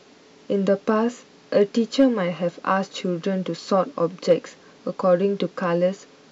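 Hard clipping hits speech peaks at 0.89, 1.57, 2.00 to 2.04, 2.70, 3.80 and 4.31 s. Overdrive reaches about 2 dB, flattening peaks into brief crackles.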